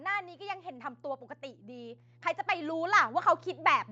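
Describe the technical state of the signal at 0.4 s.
A steady 60 Hz drone sits about 25 dB beneath the speech here and runs through the whole clip. This mains hum comes from power-line interference leaking into the signal path. At this moment the speech and background are also starting to swell together. This automatic gain rising runs from 0.37 s to 3.11 s and adds about 8 dB in total, as the gain control judges the input too quiet and slowly turns it up.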